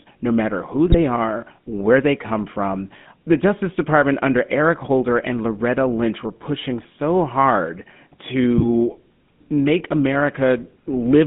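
GSM full-rate codec coding runs through the whole speech clip. Its roughness fits the 13 kbps full-rate scheme, which models the vocal tract and excites it with a sparse pulse train that keeps only one excitation sample in three. The result is a clearly audible buzzy, gravelly grain on every voiced stretch. The line band sits at roughly 150 Hz to 3.5 kHz, so the sound is thin with no low body and no high air.

GSM bit errors break in twice, from 0.86 to 0.98 s and from 8.58 to 8.67 s. Corrupted bits reached the decoder, scrambling the filter, pitch and gain parameters of the frames they hit. For a moment the spectrum warps and the level jumps, and the speech turns into squawking, popping gargle before it snaps back. The burst near 0.9 s lasts longer, which fits roughly seven damaged 20 ms frames, against about four near 8.6 s.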